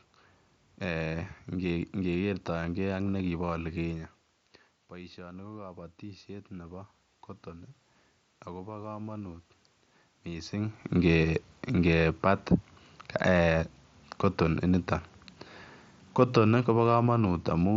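From 5.15 to 6.95 s, automatic gain rising. The input dropped about 14 dB, so the gain climbed about 4 dB. Voice and room noise swell together.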